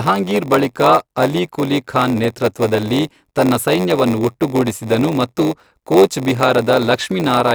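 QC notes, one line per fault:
Throughout: block size mismatch (padded). A buzz at about 93.8 Hz runs under the speech, and the speech plays at 0.938 times normal speed with its timbre essentially unchanged. This fits shorter blocks being padded with zeros to fill a 512-sample read, which leaves a brief silent gap in each block. On a waveform, tiny flat dropouts recur about every 10.7 ms. A spectrogram shows thin vertical lines at that rate and harmonic striping spaced about 93.8 Hz apart.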